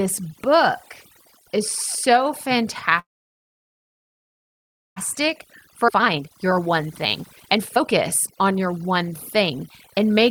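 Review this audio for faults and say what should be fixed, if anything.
The overdone noise removal runs through the whole clip. The background drops and breaks up into little twinkling specks, and quiet parts of the voice get pulled down along with the noise. Back the reduction strength off so it only trims the noise floor.

From 2.99 to 4.98 s the audio stalls. A short tail of the last sound fades out, then there are about 2 seconds of silence, and it picks up right where it left off with nothing lost. That's likely a call audio freeze: packets were held up in transit and the jitter buffer ran dry. Give the network path a bit more headroom, or let the buffer adapt sooner, so delayed packets don't starve it.

Jitter buffer speed-up kicks in from 5.20 to 10.11 s. Delivery runs about 19% fast at the same pitch, so the voice sounds hurried. The receiver was trimming tiny pitch-period slices over and over to shed roughly a second of built-up delay. 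Draining the backlog more gently would make this far less noticeable.

At 5.88 to 5.90 s there's a skip ahead. Playback jumps forward with essentially no gap, and roughly a second of audio is gone, its two sides spliced almost directly together. Later audio was already queued, so that stretch was dropped in transit or when the buffer overflowed. A larger buffer ceiling would keep it from discarding that much at once.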